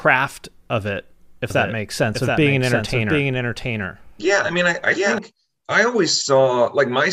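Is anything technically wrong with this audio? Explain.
Yes. From 1.50 s to 5.18 s there is a doubled audio track. The likely cause is the same speech being captured a second time by a slower path, so two copies are mixed together out of step. The second copy trails by roughly 0.7 s and sits a few decibels below the original. It is full-band with no decay or room colour, so it sounds like a dry, distinct repeat of the speech. It starts and stops abruptly.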